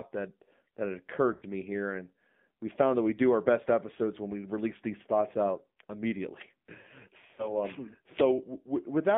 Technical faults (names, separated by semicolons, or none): AMR narrowband mobile codec; lost AMR speech frames